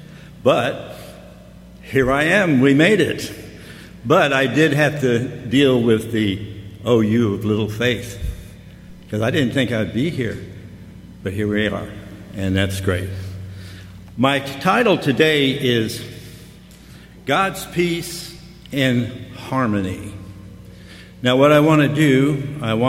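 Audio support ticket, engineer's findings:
No audible faults found; nothing to escalate.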